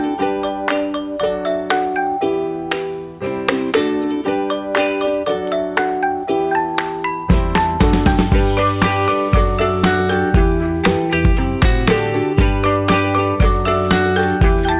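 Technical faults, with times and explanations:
Nothing here trips up the ear at any point; it's an easy listen with no technical faults to report.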